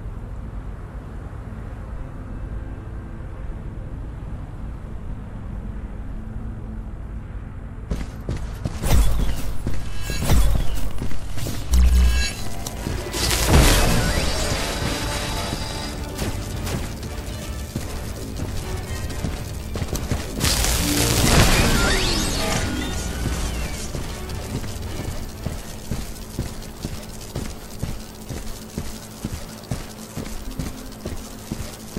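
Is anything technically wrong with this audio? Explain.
Yes. From 10.07 s to 15.87 s there is a train of clicks: short, near-identical pulses arriving at a steady 13 per second, around seventy in total, peaking a few dB above the program. The regular spacing and uniform shape point to a periodic disturbance, likely interference from nearby equipment or a faulty connection or power supply. The result is a fast, even ticking laid over the sound, audible in quieter gaps as well as under louder passages.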